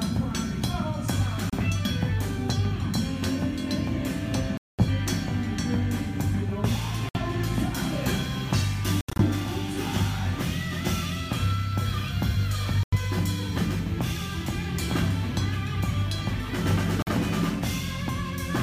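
Six short holes cut into the audio, at 1.50, 4.57, 7.09, 9.01, 12.83 and 17.02 s, lasting roughly 30 to 210 ms. The one at 9.01 s is broken into a few gaps. Each time the sound drops out and resumes further along, a classic Bluetooth dropout, likely from packets not reaching the headphones in time.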